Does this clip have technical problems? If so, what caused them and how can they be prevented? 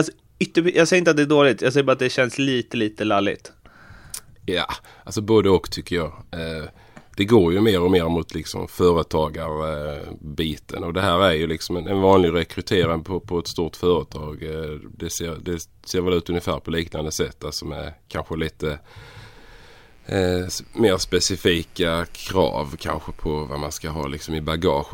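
Yes. From 19.01 s to the end, a steady, raspy mains buzz sits quietly under the speech. Sharp switching spikes twice per 60 Hz cycle fill the spectrogram with evenly spaced horizontal lines at multiples of 60 Hz up into the kilohertz range. Shielded, balanced cabling kept away from dimmers and rectifiers prevents it.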